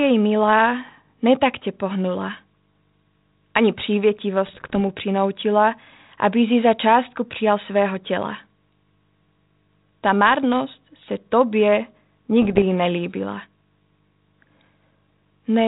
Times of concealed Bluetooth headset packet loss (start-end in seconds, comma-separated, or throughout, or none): none